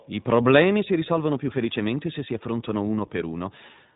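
From start to finish the speech carries iLBC codec damage that is plainly audible. The codec codes each 20 ms frame's excitation independently, and the slightly rough, synthetic texture fits its 15.2 kbps mode. Nothing above about 3.8 kHz survives, so sibilants lose their crispness. On a spectrogram, energy stops at a flat ceiling near 3.8 kHz with empty space above, and fine harmonic detail looks smeared in blocks at 20 ms intervals.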